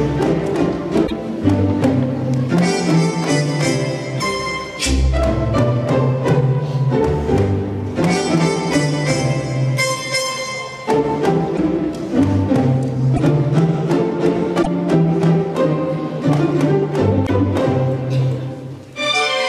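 A likely broken MP3 bit reservoir, where frames following dropped data read bytes belonging to another frame, makes the audio jump ahead with brief 30 to 56 ms glitches at 1.06, 4.19, 11.56, 13.15, 14.62 and 17.26 s.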